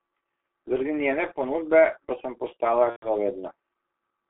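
The whole clip carries G.723.1 codec damage. The speech is confined to roughly 250 Hz to 3.5 kHz, so it sounds muffled. The coder's slow-updating voice model leaves it hoarse, with smeared consonants. The heavy roughness fits a rate near 6.3 kbit/s.

From 2.90 to 3.12 s there is VoIP packet loss concealed by the speech codec. About 120 ms of audio went missing, which fits four lost 30 ms frames. The decoder stretches its last sound and fades it, then mutes from the third lost frame. The speech stays weak or distorted briefly afterwards.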